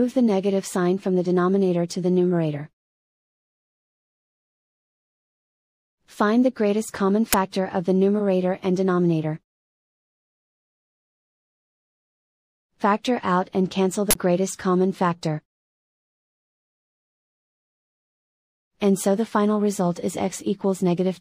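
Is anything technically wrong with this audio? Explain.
Yes. At 7.33 s there is a loud crack, and from 14.11 to 14.15 s the audio cuts to a short, loud burst of harsh digital noise. This is an uninitialised buffer: a block reached playback before any audio was written into it, so leftover memory contents were played as samples. The first burst lasts about 12 ms, which fits a 512-sample buffer. The second lasts about 46 ms, pointing to a 2048-sample buffer.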